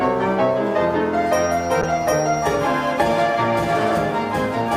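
From 1.83 s to 3.19 s, the call's bandwidth estimate fell and the encoder was told to spend far fewer bits, which fits a call bitrate drop from around 64 kbps to about 28 kbps, held at its lowest for roughly 1.3 s. With so few bits the codec quantises coarsely and gives up the top of the spectrum, so the sound turns rough and watery, with a dulled high end, until the rate climbs back.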